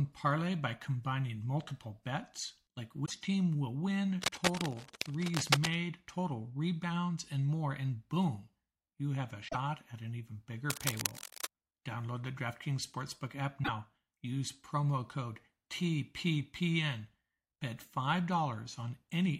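A brief glitch cuts in between "combining multiple bets like" and "team will" at 3.02 to 3.11 s, again between "boom you have a" and "at an even bigger" at 9.47 to 9.56 s, and once more at 13.62 to 13.69 s. This is damaged data in a compressed stream: corrupted bytes make the decoder misread frames and lose sync until it finds the next valid header.

From 4.21 to 5.75 s, dense, uneven scratching sits roughly level with the speech, and it returns after "at an even bigger" from 10.70 to 11.49 s, about 5 dB quieter. This is cable scratch noise, likely from a worn cable or connector whose contact resistance fluctuated as it moved.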